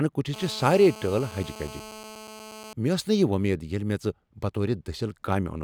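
From 0.34 to 2.73 s a GSM phone buzz sits about 17 dB below the speech: a nearby 2G handset on a call pulses at about 217 Hz, which the audio circuit rectifies. Unlike smoother mains hum at 50 or 60 Hz, it is a harsh, harmonic-rich rasp holding steady throughout.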